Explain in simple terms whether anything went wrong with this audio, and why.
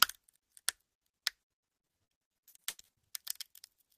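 Yes, there is a fault. From 1.41 to 2.98 s you hear repeated packet loss, giving a robotic sound. Many short pieces of sound went missing, the longest about 90 ms. Each hole was patched by stretching the last sound, so nearly half that stretch sounds choppy.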